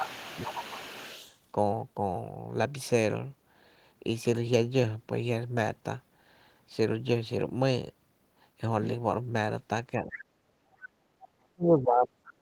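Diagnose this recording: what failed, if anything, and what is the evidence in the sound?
Speech suppressed in double talk: the talker ducks about 15 dB from 0.0 to 0.7 s, then up to about 40 dB at 9.95–10.7 s and from 11.31 s onward. This is likely the call-processing echo canceller.

Other side's voice leaking through: a second voice sits about 15 dB under the talker from 0.13 to 1.38 s, with a scrap around 25 dB down at 11.21–11.28 s. This is likely residual echo the canceller missed.

Background gated by the echo canceller: the room tone drops about 12 dB for 50 ms at 10.98–11.03 s. The canceller clamped the microphone while the loudspeaker played.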